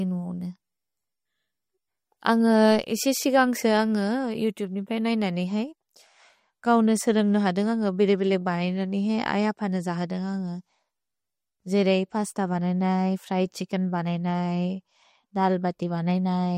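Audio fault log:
Throughout: MP3 compression, plainly audible across the speech, with nothing above 15.8 kHz. The hard top-end cutoff, a watery, swirling texture and chirpy s sounds likely come from a low-bitrate MP3 encode, which fits about 48 kbps. Short of bits, the encoder discards the treble above a fixed frequency and zeroes weak spectral lines that flicker on and off between frames, while consonant onsets smear in time.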